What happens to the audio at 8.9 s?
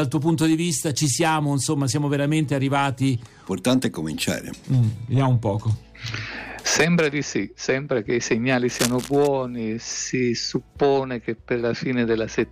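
Right around there you get a burst of cable scratch noise, running from about 8.68 s to 9.28 s, so a bit over half a second. It sounds like a dense, ragged scratching or rustling laid over the audio, and it's fairly prominent, sitting only around 10 dB under the main sound. The likely cause is a worn cable, connector or control being moved, so its contact resistance jumps around rapidly and spits uneven noise into the signal.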